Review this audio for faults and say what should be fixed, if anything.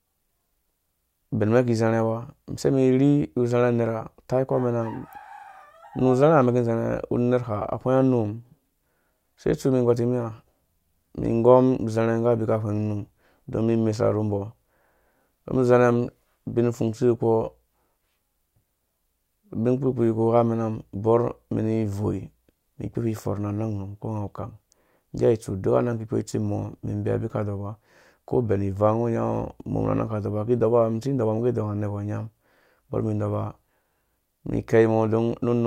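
No faults can be heard in the audio, so nothing needs to be fixed.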